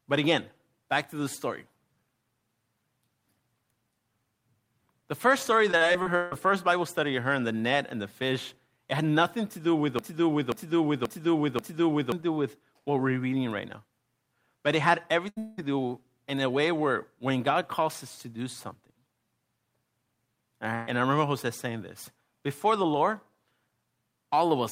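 From 5.71 to 6.47 s, repeated packet loss left six gaps, the longest 153 ms, patched by continuing the previous sound. About 40% of that stretch is concealed and 280 ms of speech is missing, so it comes across as choppy and robotic.

From 9.99 to 12.12 s there is a broken-record loop. The player, encoder or stream likely stalled and kept resending its last fragment, so a 0.53 s piece repeats four times back to back, and the speech due in that time is lost.

At 15.29 to 15.38 s, a burst of packet loss forced the receiver to stretch the last sound for 77 ms, fading it, and 80 ms of speech went missing. That runs straight into what is likely a long network dropout from 15.38 to 15.65 s. There the continued sound carries on for 190 ms without falling to silence, and 200 ms of speech is gone before the audio resumes further on.

From 20.75 to 20.89 s, another burst of packet loss is covered by 121 ms of continued, fading sound, and 120 ms of speech is skipped.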